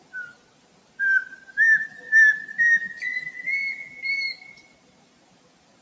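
A noise suppressor applied to music or sounds stays active throughout. Tuned for speech, it treats steady tones and decaying tails as noise, so gain swings by around 20 dB, leaving attacks intact while sustained material pumps and thins. Sound is cut by the noise suppressor from 0.31 to 0.99 s, dropping about 14 dB at its deepest, and again from 1.33 to 1.53 s by about 10 dB. From 4.51 s to the end it sinks by about 14 dB.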